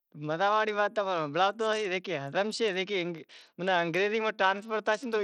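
From start to finish the speech has a grainy, band-limited quality that's plainly audible: the top end thins out and flickers, with a gritty hash riding on it. That's most likely Bluetooth SBC compression. The codec splits the signal into a few wide sub-bands and runs short of bits, so the weaker treble bands get starved and the rest are coarsely quantised. The damage points to a low bitrate, roughly 80 kbps.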